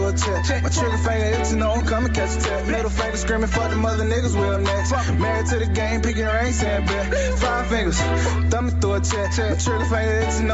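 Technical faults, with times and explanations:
Throughout, gain pumping: the gain swings by around 5 dB under each loud sound, likely from input gain set far too high with a fast limiter. The waveform looks squashed.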